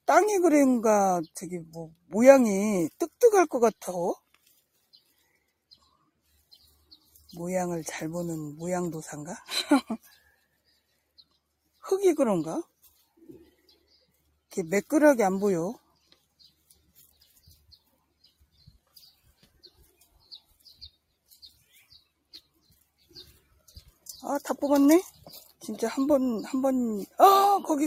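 Sound cut by the noise suppressor appears seven times: 1.65 to 2.13 s (about 19 dB down), 10.03 to 10.32 s (about 10 dB), 16.7 to 17.95 s, 18.24 to 20.94 s (the longest, about 16 dB), 21.29 to 21.99 s, 23.02 to 24.05 s and 25.11 to 25.26 s. Each time the suppressor mistakes part of the wanted sound for background noise and pulls it down, so sustained or decaying passages sink in level or end early.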